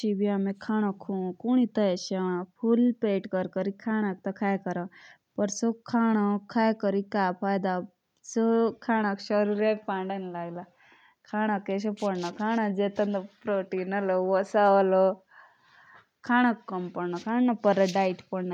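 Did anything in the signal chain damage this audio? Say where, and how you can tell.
No, nothing in the signal chain damaged this audio, and there is no point where it can be heard.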